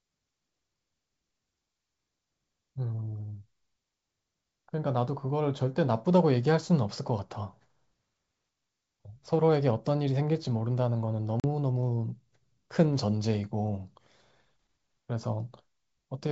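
At 11.40 s the speech drops into a sudden, hard-edged hole of silence lasting about 40 ms, ending at 11.45 s, and it comes back briefly unsteady before settling. This is packet loss on an ADPCM call: a gap of that length points to a couple of lost packets filled with silence. During the gap the receiver's adaptive predictor and step size drift away from the sender's, so the resumed sound takes some tens of milliseconds to lock back in. The G.722 wideband coding carrying the call stays clear around the gap.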